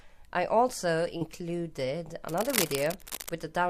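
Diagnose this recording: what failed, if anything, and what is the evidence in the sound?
Short concealed packet loss occurs twice, a network fault with receiver-side repair. At 1.17 to 1.23 s, about 40 ms of audio failed to arrive in time, and at 2.67 to 2.71 s about 20 ms. Each gap is heard as a brief smear or wobble, where the decoder extended the preceding sound, following its pitch or shaping noise to match, before crossfading back into the real signal.

From 2.29 to 3.30 s, dense, irregular scratching and rustling sits over the sound, only a few dB below the signal itself. This points to the analogue wiring stage, most likely cable scratch noise from a worn cable, connector or control being moved. Each movement shifts the contact resistance rapidly, injecting uneven noise bursts. The second dropout, at 2.67 s, falls inside this stretch.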